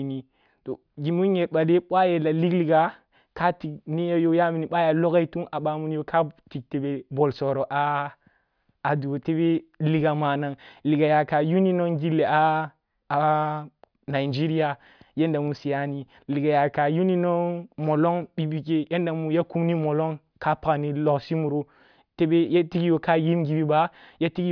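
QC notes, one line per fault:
No technical faults can be heard anywhere in the signal.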